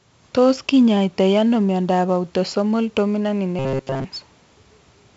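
A gritty hiss rides on the speech from start to finish, rising and falling with its loudness, and sharp onsets break up into harsh distortion. Nothing is present above 7.7 kHz, which leaves the sound dull. This is heavy 4-bit ADPCM compression. Each sample is coded as a coarse 4-bit step from a prediction, and the step size adapts too slowly for sudden attacks. The hiss and the bandwidth limit fit a 64 kbps stream.

From 3.59 to 4.05 s the speech turns into a rigid, metallic buzz at 134 Hz that still roughly tracks its contour. This is robotic sound from repeated short buffers, and the cause is likely audio arriving too late. The playback fills the gaps by looping the last fragment, about 7.5 ms long, which sets that fixed pitch. Most of this stretch is repetition rather than new audio.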